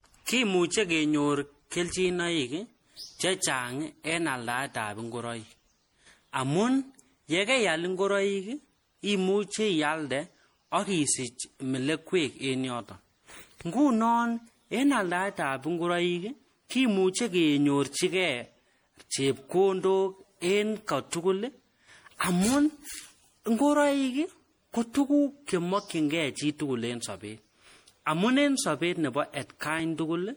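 From the first moment to the end, the speech carries a swirly, hollow quality with smeared consonant onsets, more damaged than a single lossy encode would leave it. That's generation loss: the audio has likely been through an MP3 encoder around five times, each pass quantising again on a shifted frame grid so the noise and spectral gaps pile up. The character points to a chain at about 64 kbit/s.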